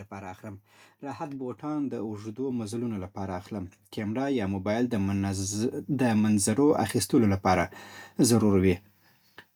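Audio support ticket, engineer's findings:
Speech and background swell together in a slow, steady climb from 0.1 to 8.84 s, about 18 dB overall. Automatic gain rising: AGC read input as too quiet and ramped gain gradually.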